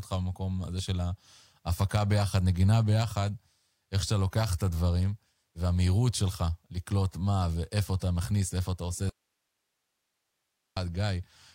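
At 9.09 s the signal feeding the chain is lost, most likely through a break upstream, while everything after that point stays live. The result is an audio dropout to a faint residue. The speech cuts off abruptly rather than pausing or fading, and for 1.67 s, until 10.77 s, only a thin bed of hiss remains, roughly 55 dB below the normal level. Then the speech snaps straight back in.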